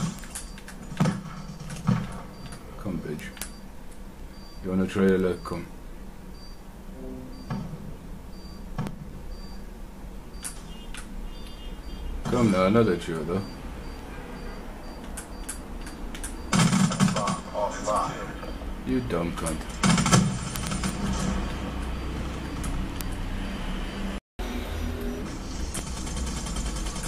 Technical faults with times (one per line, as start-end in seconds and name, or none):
0.19-27.02 word clock ticks
24.18-24.39 playback stall
24.39-25.22 catch-up at higher speed